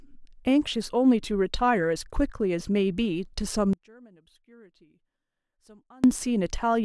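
It's a speech clip, and from 3.73 to 6.04 s the voice drops about 28 dB to a faint ghost, likely one channel inverted cancelling the centre in mono.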